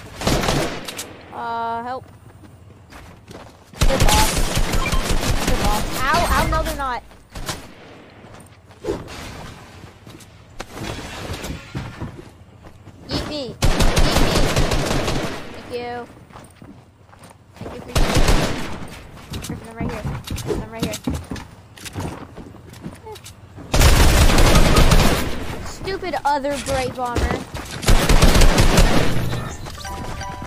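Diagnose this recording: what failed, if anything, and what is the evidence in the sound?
Nothing failed; no fault is audible anywhere.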